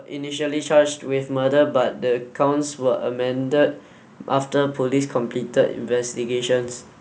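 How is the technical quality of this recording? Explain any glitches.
The level climbs at the start: from 0.07 to 1.61 s the speech and the background noise swell together by about 7 dB. This is automatic gain rising. The gain control judged the opening input too quiet and raised its amplification gradually over that second and a half, lifting everything it was passing rather than just the talker. The sound has passed through call microphone processing, and nothing is audible above 8 kHz.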